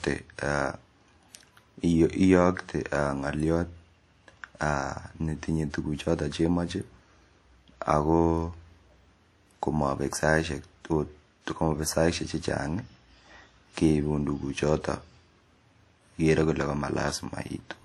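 Throughout the speech, a ringing, washy texture and a hiss that swells and fades with the signal are plainly audible, likely from WMA compression. Long transform blocks smear quantisation noise over tens of milliseconds, consistent with WMA 1 near 48 kbps, with nothing above 18.8 kHz.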